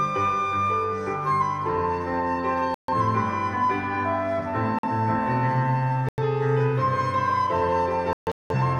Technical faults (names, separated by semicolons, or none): corrupt frame muted